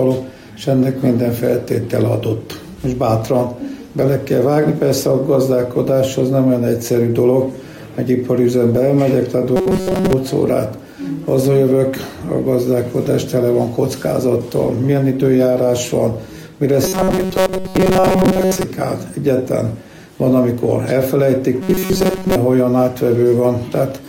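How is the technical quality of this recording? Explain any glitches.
The recording has a recurring robotic sound from repeated short buffers, at 9.56–10.13 s, 16.84–18.63 s and 21.62–22.36 s. The sound turns into a rigid metallic buzz fixed at 188 Hz, likely from a starved stream looping a roughly 5 ms buffer over most of the audio in those spans. Unlike dropouts, which leave silence, this keeps a steady pitched drone.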